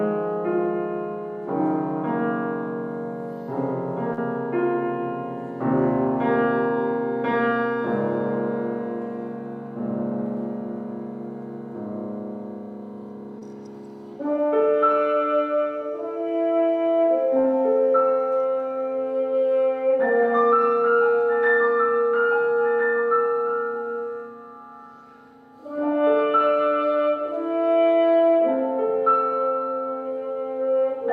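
The audio has three short concealed packet losses, at 4.13 to 4.19 s, 13.39 to 13.43 s and 17.41 to 17.46 s. About 40, 20 and 20 ms of data arrived too late. The receiver extended the preceding sound to bridge each gap, then faded back in. Each one sounds like a brief smear or wobble.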